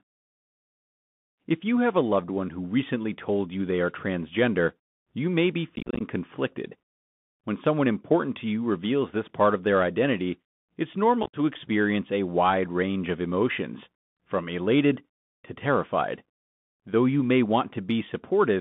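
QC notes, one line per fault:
Throughout: Bluetooth CVSD headset codec. The speech is confined to roughly 150 Hz to 3.6 kHz, consistent with a 64 kbps CVSD link. The one-bit delta coding leaves a granular hiss underneath, sibilants turn scratchy, and loud high-frequency energy outruns the adaptive step size and distorts plainly.
5.76 to 6.02 s: unconcealed Bluetooth headset packet loss, just after "transgender you may be". About 150 ms of audio drops out in short holes scattered over about 250 ms, the longest about 38 ms. Lost packets are replaced by silence or an idle pattern, leaving holes with abrupt edges, so the passage crackles and sounds chopped.
11.23 to 11.36 s: unconcealed Bluetooth headset packet loss, between "of their identity it's" and "experience a wide range". About 83 ms goes missing within about 105 ms, including one gap of about 53 ms. The holes have hard edges, and the CVSD decoder resumes briefly quieter after each gap.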